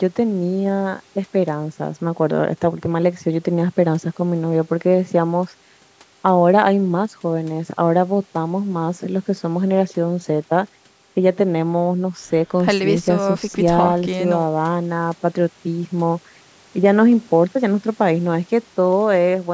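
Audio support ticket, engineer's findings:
No faults found; call microphone processing as expected.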